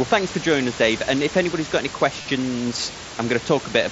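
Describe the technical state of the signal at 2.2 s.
Right around there, from 2.22 to 2.25 s, there's concealed Bluetooth headset packet loss. About 30 ms went missing, which fits a short run of lost frames, and the receiver filled it by repeating the last bit of waveform, giving a brief buzzy held tone and a slight warble as the real sound returns.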